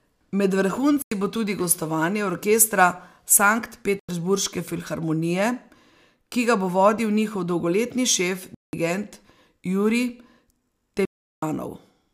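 At 1.02 s and 3.99 s the speech drops into a block of digital silence lasting about 93 ms, then again at 8.55 s for 186 ms and at 11.05 s for 372 ms. The output buffer likely went unfilled, and the lengths, one, one, two and four times 4096 samples, fit whole 4096-sample buffers. At each edge the signal jumps straight to silence and back with no fade. A fade or a concealed packet loss would ramp or smear instead.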